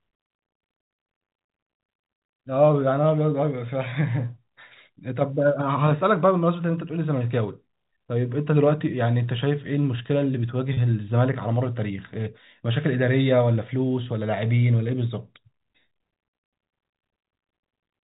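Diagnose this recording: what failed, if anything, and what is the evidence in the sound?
Network stage: around 10.74 to 10.77 s there's about 30 ms of packet loss with pitch repetition, consistent with a single dropped packet. The receiver bridged the hole by looping the last pitch period, so you hear a brief held, slightly buzzy note under the telephone-band G.711 sound before it picks up again.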